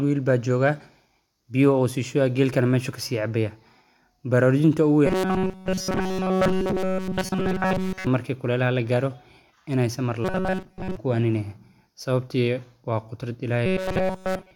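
From 5.06 to 8.07 s, 10.25 to 10.97 s and 13.66 s to the end at 14.55 s, the speech turns into a rigid metallic buzz fixed at 188 Hz. It is entirely buzz in the first and last stretches and mostly buzz in the middle one. This robotic sound is likely from repeated short buffers, a roughly 5.3 ms chunk looped while the real audio is skipped. The waveform shows identical repeating cycles, and the spectrogram shows flat, evenly spaced harmonic lines.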